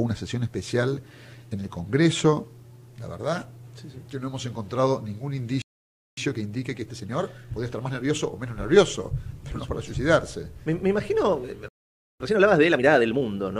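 At 5.62 s the audio cuts to silence for about 0.56 s, a playback stall, likely caused by the player running out of buffered data or its thread being blocked. A second stall of about 0.52 s follows at 11.69 s.

Each stall is followed by a time-compressed catch-up. The player trims small segments and cross-fades them to drain the backlog. From 6.17 to 8.39 s the audio runs 1.25 times fast. From 12.20 to 13.22 s it runs 1.5 times fast. Pitch stays normal, but the sound is hurried.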